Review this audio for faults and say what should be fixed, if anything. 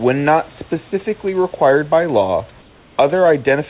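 From 2.6 to 2.98 s, right after "specifically required by law", the room background turns into steady, featureless hiss about 2 dB quieter. This is comfort noise in place of the background, likely because discontinuous transmission stopped sending during the pause and the receiver synthesised filler. On a spectrogram, that 380 ms stretch shows smooth, uniform texture below the narrowband call path's 4 kHz ceiling, and the waveform's noise floor dips slightly. Turning off discontinuous transmission at the sender would keep the real background throughout.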